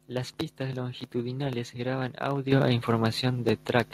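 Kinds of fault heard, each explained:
Microphone volume stepped up: the input gain jumps about 9 dB in one step at 2.52 s, right after "pistas longitudinales graban", lifting voice and background together.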